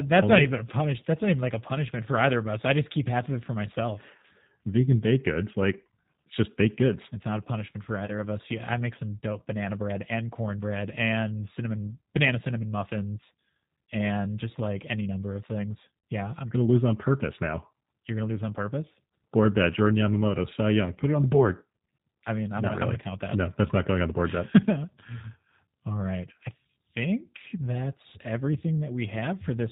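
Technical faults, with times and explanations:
Throughout: G.729 codec. The speech is plainly coloured by this low-rate VoIP coding, and the sound fits a G.729A stream at 8 kbit/s. Nothing above 4 kHz survives, so sibilants lose their edge. The decoder rebuilds each 10 ms frame from a vocal tract filter, a pitch predictor and a few pulses. That sparse excitation leaves the voice rough and slightly synthetic, though it stays intelligible.
8.06 to 8.10 s and 16.00 to 16.04 s: VoIP packet loss concealed by the speech codec. About 20 ms of audio goes missing at 8.06 s, which fits one lost packet. At 16.00 s about 40 ms goes, which fits two. The decoder fills each gap by extending its last pitch and filter at falling gain. This gives a brief buzzy or noisy, fading smear. The speech stays weak for a moment after, because each frame builds on the one before.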